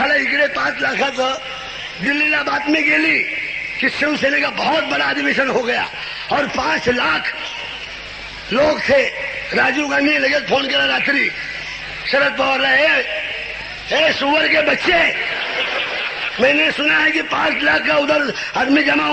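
No technical faults can be heard anywhere in the audio. Nothing breaks up, drops out or changes character at any point.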